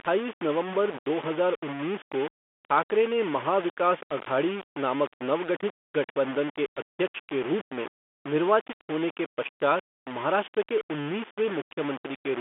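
Throughout the clip, the speech carries a coarse, grainy distortion that moves with its level. Quiet stretches turn gritty and sputter toward silence. The error sits only about 15 dB below the speech. The likely cause is low bit depth without dither: rounding to very few levels, which fits a 4-bit signal. The telephone band, which ends near 3.8 kHz, stays clean.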